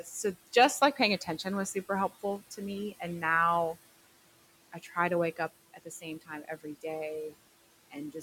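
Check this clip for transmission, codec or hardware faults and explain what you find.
Two faults come from the noise suppression stage; the room noise underneath, about 19 dB below the speech, is simply part of the recording.

Noise suppressor artifacts run through the whole clip. The suppressor pulls down the bands it judges to be steady noise by about 18 dB, frame by frame, so the room noise sinks in the gaps and rises back under the speech.

Speech cut by the noise suppressor occurs at 2.09–2.6 s, 4.72–4.96 s, 5.74–6.05 s and 6.21–6.84 s. The suppressor mistakes quiet parts of the speech for noise and turns them down with the background, by about 11, 11, 13 and 16 dB at worst. Within each stretch, roughly a tenth to a fifth of a second of sound comes out swallowed or faint.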